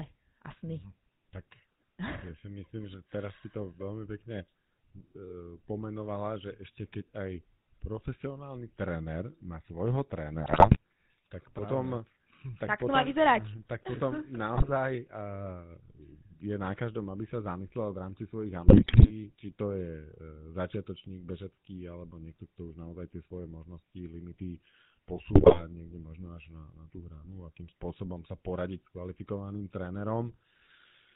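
The GSM full-rate codec colours the whole speech clip with a buzzy, gravelly roughness and nothing above 4 kHz. The vocal tract is rebuilt from a coarse pulse excitation, and the plainly audible damage fits a 13 kbps GSM stream.

GSM bit errors come at 10.43 to 10.77 s, after "profesionálny tréner má svojho"; 14.54 to 14.70 s; 18.66 to 19.11 s, before "či to je"; and 25.33 to 25.61 s, before "niekde možno až". Corrupted filter, pitch and gain values warp the spectrum and level frame by frame, so the speech squawks, pops and gargles.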